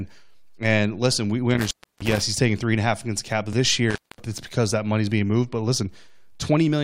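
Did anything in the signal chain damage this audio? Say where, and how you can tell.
Yes. Intermittent contact in the analogue wiring: the speech cuts out from 1.51 to 2.22 s and from 3.90 to 4.24 s, opening for about 310 and 230 ms. Crackle at the edges and hiss through the gap point to a loose connector rather than a digital dropout.

Overlap between stream segments at playback: a single tiny skip at 3.53 s, with no hiss or gap. This fits a clipped overlap at a 4-second segment boundary.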